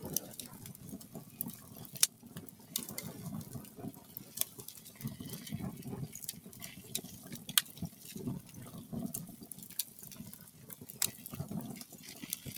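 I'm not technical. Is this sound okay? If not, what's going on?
No. Throughout the clip the level keeps rising and falling in an uneven way, so the sound seems to breathe or flutter rather than hold steady, and lingering sounds fade away sooner than they should. This is a noise suppressor applied to music or sounds. It is a tool built to clean up speech, and it mistakes steady tones and the natural ring-out of sounds for background noise. It turns those parts down while letting sudden hits through, so the balance keeps shifting.

In a few places the suppressor pushes particular sounds down more than the rest: from 1.03 to 1.4 seconds, 2.09 to 2.31, 2.5 to 2.72, 3.95 to 4.16, and 10.46 to 10.64. Each lasts a fraction of a second, and in each the sound briefly sinks, as if someone dipped the volume. This is sound cut by the noise suppressor. The tool judged those moments to be noise and lowered them, and held or fading sounds lose the most.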